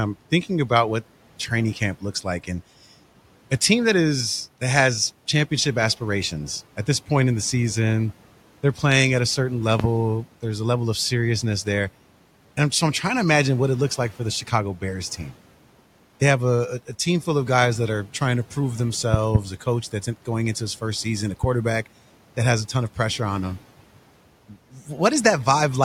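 Loud pops show up three times. The first is a double pop from 9.80 to 9.87 s, right after "at a certain", peaking about 15 dB over the speech. The second is another pair from 19.14 to 19.38 s, between "are trying to prove" and "a coach that's going", at roughly 20 dB above. The third is a single one at 21.44 to 21.46 s after "his first season a", also around 20 dB up. Each sounds like a sharp thump landing on top of the talking, which carries straight on underneath. The likely cause is an electrical pulse from a plug, switch, static or driver glitch getting into the signal path.

Near the end, from 24.72 to 24.89 s, there's speech cut by the noise suppressor. It mistook part of the speech for background and pulled it down by up to about 10 dB for around a tenth of a second, so that bit sounds swallowed and faint. The room noise it was working against sits about 23 dB under the speech.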